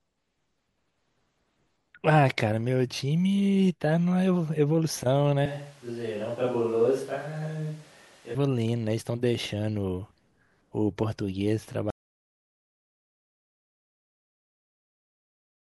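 At 5.46 s the speech turns roomy and hollow, thinner in the bass and about 5 dB quieter, with background noise now only about 30 dB below it; the likely cause is a switch to a distant microphone. The close sound returns abruptly at 8.35 s.

From 11.90 s to the end, the audio drops out to silence: the signal stops mid-flow and leaves silence with no room tone at all. This points to a lost input, likely a disconnected device, failed link or mute.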